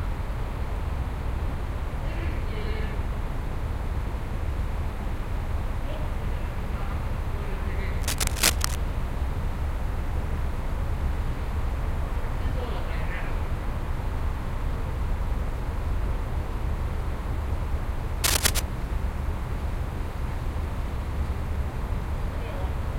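From 8.00 to 8.77 s and again from 18.24 to 18.59 s, dense, uneven scratching and rustling sits over the sound, first at roughly the same level as the sound and then somewhat louder. This is cable scratch noise, likely from a worn cable, connector or control being moved so its contact resistance jumps about. Unlike isolated clicks or steady crackle, it arrives as short, irregular bursts tied to a moment of handling.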